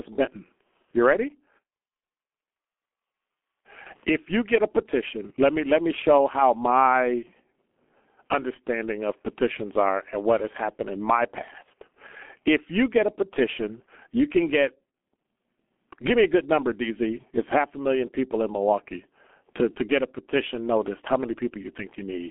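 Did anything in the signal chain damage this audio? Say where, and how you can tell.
Yes. The damage comes from a G.723.1 codec, present from start to finish of the speech. Nothing reaches above about 3.7 kHz, and the lows thin out below roughly 250 Hz, so the voice sits inside a narrow telephone band and sounds muffled. Consonants smear and the tone turns hoarse because the codec sends only a coarse vocal-tract model every 30 ms frame. That heavy coding damage fits a bitrate near 6.3 kbit/s.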